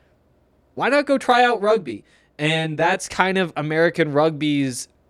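From 1.31 s to 3.12 s, just after "not go", the speech takes on channel delay (comb filtering). One channel runs late by around 20 ms, and when the two are summed to mono, the shared content cancels at regularly spaced frequencies, starting near 30 Hz. The voice turns rough and slightly doubled. A spectrogram shows fixed dark horizontal stripes at even intervals through that span, and the waveform's envelope looks smeared, with doubled onsets.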